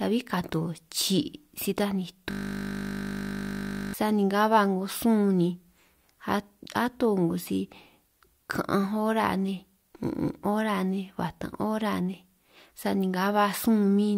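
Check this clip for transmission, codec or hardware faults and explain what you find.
One hardware fault stands out. A system hang loop runs from 2.31 to 3.94 s, right after "si taj ni" and ending just before "sani nga ba 'ngo". The computer or its audio driver stalled while the sound hardware kept replaying the same 20 ms stretch of its ring buffer, repeating it roughly eighty times over 1.6 s. Because the looped piece is so short, it merges into a steady buzz at 50 Hz rather than an audible stutter.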